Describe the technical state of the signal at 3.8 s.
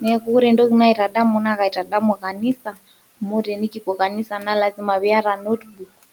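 At 3.8 s the speech sounds swallowed and faint, dipping up to about 15 dB. This is speech cut by the noise suppressor between 3.21 and 4.48 s, which mistook quieter speech for background and turned it down.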